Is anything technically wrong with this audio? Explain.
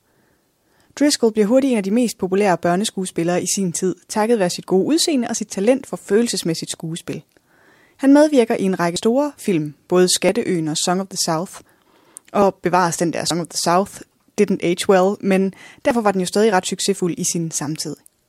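Yes. Dropped buffers (overrun) at 8.96 s, between "medvirker i en række" and "film både", at 13.31 s, after "bevares den der" and before "of the", and at 15.91 s, between "didn't age well men" and "var den jo stadig". Each is likely a block of samples overwritten before the software read it. The speech on either side is spliced together with no gap, so each spot gives a sudden forward jump, roughly 70 ms at the first two and a shorter skip of about 20 ms at the last.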